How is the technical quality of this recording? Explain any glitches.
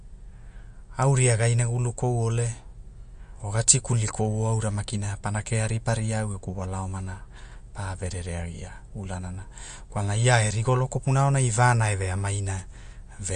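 The technical quality is poor. Audible compression damage runs through the whole speech recording.

Throughout, nothing is heard above 9.5 kHz, and the sound is watery and swirly. The likely cause is MP3 compression at a low bitrate, around 45 kbps. Short of bits, the encoder cuts the treble and drops quiet frequency detail that flickers between frames.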